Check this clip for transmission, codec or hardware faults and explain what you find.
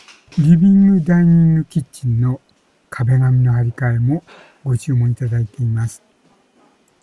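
No transmission, codec or hardware faults are audible.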